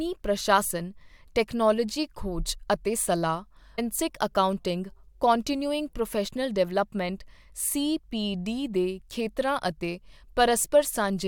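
It's a speech clip with one clear glitch: at about 3.78 s the audio jumps forward with a quick blip, so a chunk of the talk just isn't there. That's most likely a stream segment skipped, where one segment failed to load and the player carried on with the next.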